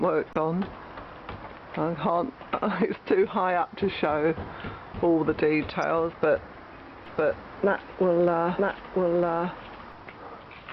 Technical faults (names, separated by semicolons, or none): damaged data in a compressed stream; doubled audio track